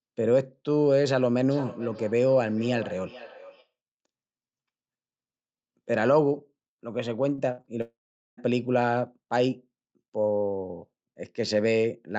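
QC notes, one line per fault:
1.5–3.73 s, feedback echo between two devices. Each stretch of speech returns about 0.4 s later, at its loudest about 16 dB below the direct speech. A second device in the room played the far end's audio back into a live microphone. That device's echo canceller only knew its own playback, so the loop was never removed. The repeats sound thinner and more ringing than the original.
7.35–7.40 s and 7.62–7.65 s, short concealed packet loss. About 20 ms of audio failed to arrive in time at each point. The decoder filled the gap by extending the preceding sound, 26 ms at the first and 19 ms at the second, then blended back into the real signal. Each gap is heard as a brief smear or wobble.
7.52–7.60 s, burst of packet loss. About 60 ms of consecutive audio went missing. The receiver extended the last sound for about 56 ms and faded it down as the gap went on. A voiced stretch turns into a short held buzz and an unvoiced one into a fading hiss. 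The speech then resumes further on, and the stretch in between is gone.
7.81–8.39 s, long network dropout. About 0.56 s of audio never plays. The last sound carries on briefly as a fading buzz or hiss, and about 0.42 s of silence follows before the speech comes back further along. The likely cause is a stall in the network path. No packets reached the receiver for over half a second, and its concealment ran out. Coming so close after the losses at 7.35 to 7.65 s, this fits one degrading connection.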